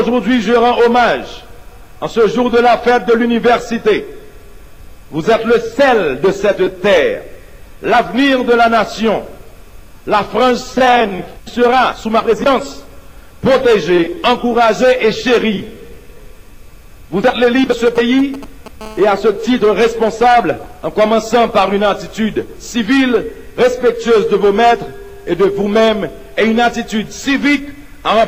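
GSM signalling bursts from 17.72 to 18.82 s: a nearby 2G phone's radio bursts are rectified by the audio circuit, giving a galloping dit-dit-dit of short 217 Hz buzzes, roughly 15 dB below the signal. GSM phone buzz follows from 18.82 to 21.65 s as the phone enters a call, a steady, raspy 217 Hz buzz rich in harmonics, about 28 dB below the signal.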